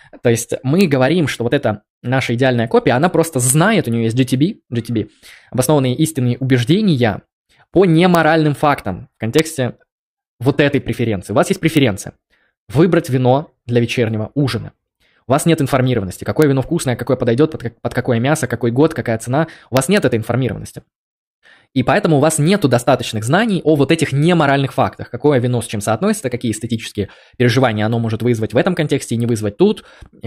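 Integer overflow strikes this speech at 0.81, 3.50, 8.15, 9.39, 11.77 and 16.42 s, and again across 19.77 to 19.97 s. On each loud peak, a sum or gain exceeded the largest representable integer. Instead of being held at the ceiling, the value wrapped to the opposite extreme, even though the peaks only just reached the limit. Each event is a violent crack, far harsher than clipping, and the longer stretch near 20 s lasts about 0.2 s.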